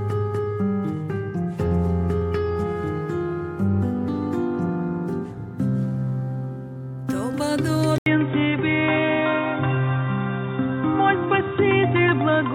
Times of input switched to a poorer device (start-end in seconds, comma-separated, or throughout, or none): 7.98-12.54